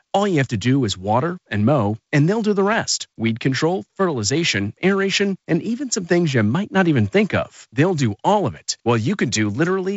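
Nothing stood out on listening.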